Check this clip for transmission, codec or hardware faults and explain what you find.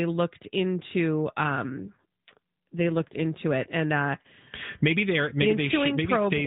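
One fault is audible: an AMR rate drop from 1.68 s to 3.26 s, starting after "looked into" and recovering before "it and uh". The speech stays within the same narrowband AMR channel, with nothing above 4 kHz and no gap, but it turns buzzier and more synthetic. When the radio link weakens, the network switches the codec to a lower mode and uses the freed bits for error protection. The degradation fits a step down from about 12.2 kbps to about 5.9 kbps. Full quality returns when the rate steps back up.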